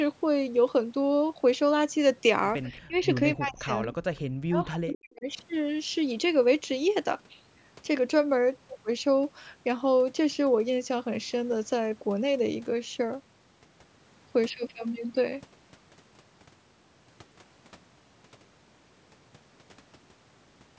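Speech captured through a call's microphone chain, whose band reaches up to 8 kHz, carries faint, brief ghosts of the voice at 2.64 to 2.69 s and again at 3.82 to 3.87 s. Each is a delayed copy trailing the original by 229 ms, sitting about 25 dB below the speech. This is an echo leak: a loudspeaker on one end fed sound back into its microphone, and the echo canceller likely failed to strip out that residue before it was sent on. Right around those ghosts the talker's own voice keeps sinking and breaking up, at 2.73 to 2.94 s, 3.35 to 3.71 s, 3.88 to 4.04 s and 4.46 to 5.26 s. The drops are deep, roughly 35 to 40 dB at worst, though closer to 20 dB in the 3.35 s stretch, and the longest run of gaps adds up to around 0.7 s. That pattern points to speech suppressed in double talk, where the canceller, likely unable to tell the near talker from the returning echo while both were active, clamped down on everything. 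From 14.50 s to the end the sound abruptly turns duller and more boxy, yet there is no gap at the change and the loudness stays the same. A very low new noise floor appears, far below the speech. That sudden narrowing marks an input switched to a poorer device, most likely a headset's call profile or a lesser microphone taking over mid-recording.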